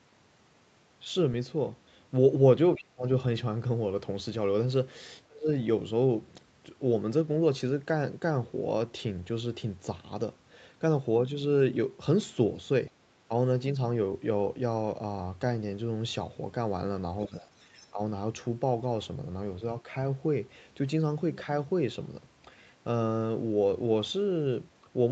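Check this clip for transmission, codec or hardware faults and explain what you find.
Two echo-canceller faults affect the call's speech, both tied to moments when the far side was talking at the same time. The missing lowest bass comes from the call's normal microphone high-pass filter.

Speech suppressed in double talk occurs at 2.75–3.05 s, 5.27–5.49 s, 17.28–17.54 s and 17.91–18.0 s. The voice sinks by around 35 dB at worst and by about 15 dB at the mildest. The likely cause is the canceller mistaking overlapping talk for echo and muting both.

The other side's voice leaking through appears as brief scraps at 17.19–17.29 s and 17.81–17.87 s, some 20 to 30 dB below the talker. It most likely comes from loudspeaker sound that the canceller failed to remove.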